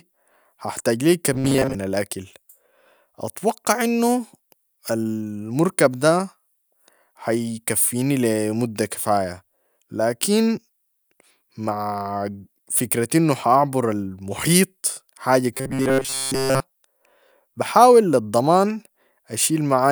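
From 1.33 to 1.75 s and again from 15.54 to 16.6 s the speech turns into a rigid, metallic buzz at 133 Hz, likely robotic sound from repeated short buffers: a 7.5 ms slice loops over most of each stretch. Unlike ordinary distortion, the pitch stays fixed.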